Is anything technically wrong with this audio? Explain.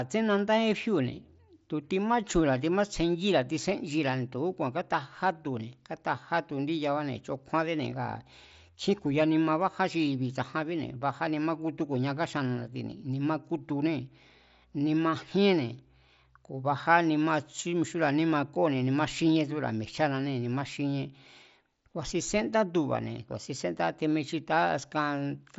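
No, nothing is technically wrong with this speech audio.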